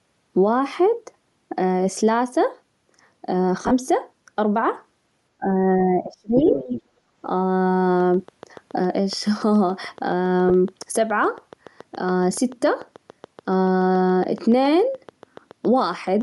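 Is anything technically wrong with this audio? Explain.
Yes, several faults are audible in this speech.

Throughout, the sound is breathy and grainy at the top. This is likely Bluetooth LC3 compression, consistent with around 48 kbps and 10 ms frames.

Lost LE Audio frames occur from 3.63 to 3.71 s, with about 60 ms missing in runs up to roughly 30 ms. The decoder repeats the last spectrum, so the speech smears into noise. A single 10 ms loss at 10.49 to 10.51 s gives a brief noisy blur.

From 5.37 to 6.46 s, the talker dips by up to about 30 dB for roughly 0.7 s. This is likely speech suppressed in double talk, with the echo canceller ducking both sides.

From 6.35 to 6.82 s, the other side's voice is leaking through, about 5 dB below the talker. Likely the echo canceller left loudspeaker pickup in the microphone.

From 6.97 to 7.12 s, the room sound drops by about 9 dB, then returns. 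This is background gated by the echo canceller while it clamps the microphone.

From 8.0 s to the end, a train of clicks ticks regularly at 7.07 per second, about 50 in all, roughly as loud as the speech. The likely cause is interference or a faulty connection or power supply.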